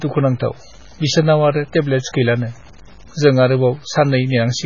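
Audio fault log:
Throughout: low bit depth without dither. Quiet passages of the speech turn gritty, with distortion about 30 dB below the signal that rises and falls with the sound and is likely caused by truncation to roughly 7 bits. Because no dither was used, the error follows the signal and is not a steady hiss.
Throughout: MP3 compression. Nothing is heard above 7 kHz, and s sounds and onsets come out watery, swirly and smeared. This likely comes from heavy encoding at a very low bitrate, around 16 kbps. Unlike the grit, these artefacts shift frame by frame as weak frequency lines drop in and out.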